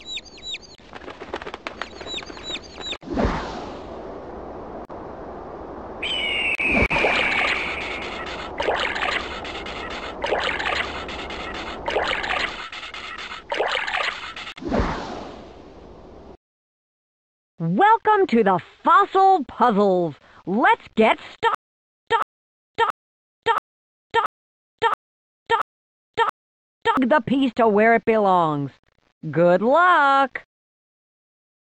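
From 21.55 s to 26.97 s, a stutter with silent gaps: the same 0.16 s burst sounds eight times, each followed by about 0.52 s of dead digital silence, repeating every 0.68 s. The likely cause is a stalled stream replaying its last fragment at each retry, so the audio meant for that span is lost.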